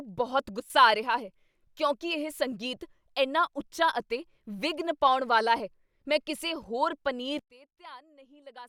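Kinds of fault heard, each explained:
Sudden gain jump: Speech and background drop together, about 12 dB at 0.6 s, then about 24 dB at 7.39 s. Likely a gain change applied without a ramp.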